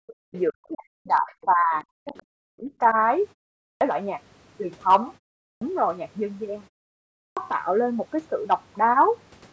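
Background gated by the echo canceller opens the clip, from 0.00 to 0.21 s. With the loudspeaker active, the canceller pulled the microphone down by about 40 dB, so the room sound drops almost to nothing for about a fifth of a second before it returns.

Other side's voice leaking through appears as faint scraps at 0.35–0.39 s, 1.13–1.20 s and 2.07–2.23 s. They sit roughly 30 to 35 dB below the speech, most likely loudspeaker output that the echo canceller failed to fully remove from the microphone.

Speech suppressed in double talk follows at 0.51–1.74 s, 2.05–2.16 s and 2.44–2.96 s. The talker's speech dips sharply, very deeply in the first and last spans and more mildly in the middle one. This is likely the canceller turning everything down while both sides spoke at once.

Clipped start after a pause occurs at 3.62, 5.42 and 7.16 s, following silences of 0.36, 0.31 and 0.55 s. Each time the output device needed to wake before playing, so about 0.19, 0.19 and 0.21 s of speech onset is lost, and the sound begins abruptly out of silence.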